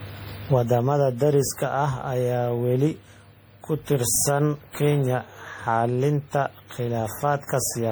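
Across the whole recording the speech has a swirly, hollow quality, with smeared consonants and blurred attacks, more degraded than a single low-rate encode would sound. That points to generation loss, likely from the audio being decoded and re-encoded roughly ten times with a lossy codec such as MP3 near 64 kbit/s. Each pass re-quantises on a shifted frame grid, so noise and spectral gaps accumulate instead of staying fixed.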